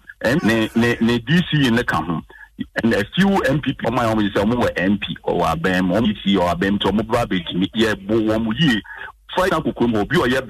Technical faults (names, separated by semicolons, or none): damaged data in a compressed stream